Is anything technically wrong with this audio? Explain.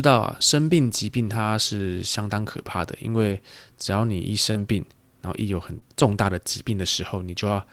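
Yes. Two kinds of network-transmission fault appear in this speech.

Lost packet rebuilt from error correction occurs at 1.77–1.79 s (20 ms), 3.29–3.35 s and 4.55–4.61 s (40 ms each, which fits two separate 20 ms packets). The lost audio was replaced by the low-bitrate copy that Opus sends inside the following packet, so there is no gap. These stretches sound briefly rougher and noisier. Unlike concealment, the rebuilt audio still follows the actual speech.

Short concealed packet loss occurs at 4.51–4.57 s and 5.79–5.84 s. About 40 ms and 20 ms of audio never arrived in time, and no backup copy was available. The decoder filled each hole by extending the last sound, continuing its pitch or its noise shape, then blended back into the real audio. The result is a short smear or wobble rather than roughness. At 4.5 s the concealment runs straight into an error-correction rebuild.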